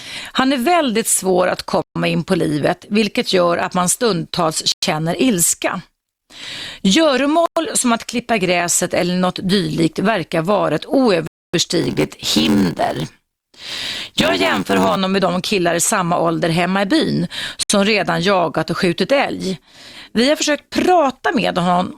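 Swedish speech with five dropouts to flat silence at 1.82, 4.72 (after "gör att man stundtals"), 7.46 (before "som att klippa gräset"), 11.27 and 17.63 s, lasting 67 to 265 ms, appearing as blank vertical gaps in the waveform, likely Bluetooth stalls. From 11.8 to 15.0 s, before "med de killar i", a block size mismatch (padded) adds an 86.1 Hz buzz, visible as regular zero-filled notches, and slows the audio to 0.861 speed, which fits 512-sample reads.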